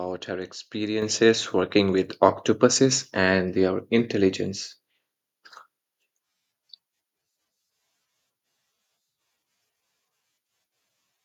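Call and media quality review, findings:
Microphone volume stepped up at 1.02 s. Voice and background jump together by about 7 dB. Call software raised mic input gain in one step after judging level too low.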